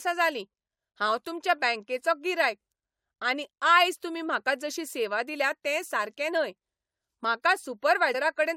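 At 8.14 s the speech jumps forward abruptly: compressed frames were skipped, with about three frames of roughly 21 ms each either missing or rejected by the decoder as damaged, so around 70 ms of audio never plays. Unlike a dropout, there is no silent gap, because the sound simply resumes further along.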